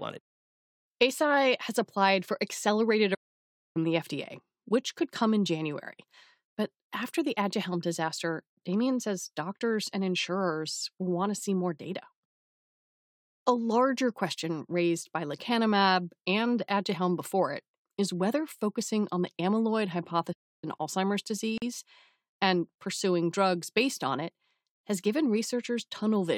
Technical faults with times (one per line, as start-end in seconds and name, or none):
3.14-3.77 playback stall
20.32-20.64 playback stall
21.58-21.62 gap at a join of encoded pieces